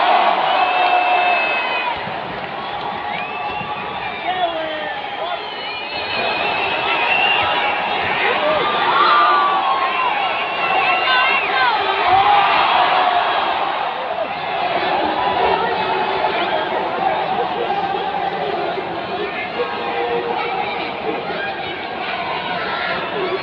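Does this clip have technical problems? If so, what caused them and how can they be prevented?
No, nothing in this clip points to a technical fault, so there is no cause to trace and nothing to prevent.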